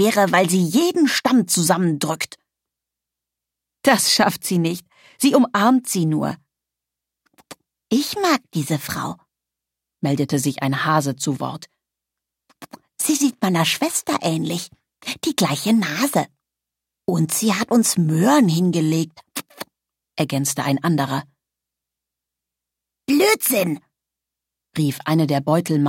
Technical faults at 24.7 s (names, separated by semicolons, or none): none